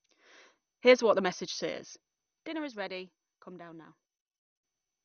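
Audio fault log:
throughout: MP2 compression. The sound is dull and muffled, with nothing above 6.5 kHz. A gurgling, granular roughness sits on the speech. It is likely MPEG Layer II coding at a low rate, which fits something near 48 kbps. The codec divides the spectrum into 32 equal sub-bands and shares out a small bit budget. Upper bands are dropped entirely. The bands that remain are quantised coarsely and flicker in and out, producing the watery grain.
2.47–4.65 s: sudden gain jump. At 2.47 s the level drops abruptly by about 12 dB and stays down. At 4.65 s it snaps back up. The speech and the background noise fall and return together, so the change lies in the signal chain, not in the talker. There is no fade either way. A digital gain change applied instantly, from one sample to the next without a ramp, is the likely cause.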